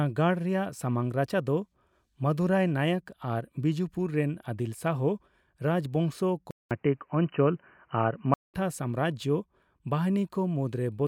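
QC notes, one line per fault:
6.51–8.54 s, input switched to a poorer device: the input likely moved to a narrower-band microphone, so after a 200 ms silence the speech loses everything above 3 kHz and turns dull and boxy, with a small level shift and faint new background noise.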